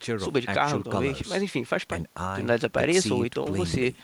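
No faults are audible anywhere in the recording; the speech runs continuously with no dropouts, clicks, distortion or timing irregularities to report.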